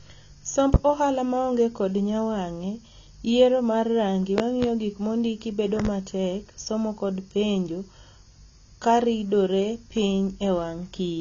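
A speech recording with two problems. Across the whole clip there is plainly audible AAC compression: the spectrum stops at 7 kHz, and the remaining band has a smeared, watery texture. That texture is what sets it apart from a simple low-pass filter or a low sample rate, both of which would dull the top without adding artefacts. The damage fits a low-rate AAC-LC encode around 24 kbps, which likely accounts for it. Separately, a loud pop sits on top of the speech at 0.74 s as a single hit. At 4.38 to 4.66 s and again at 5.80 to 5.89 s, each spot has two pops in quick succession. The first two spots peak some 20 dB above the speech and the last about 15 dB. The speech carries on underneath rather than dropping out, which separates these from dropouts or buffer glitches. Sudden voltage steps from a connector, switch or static discharge are the likely cause.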